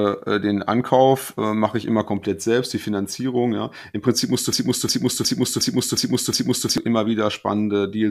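After "musst du", from 4.53 to 6.78 s, a 0.36 s fragment repeats six times back to back. This is a broken-record loop, likely from a stalled stream resending its last chunk.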